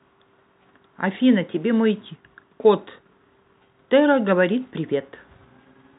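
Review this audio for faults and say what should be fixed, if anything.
Nothing in this speech needs to be fixed, as no faults can be heard.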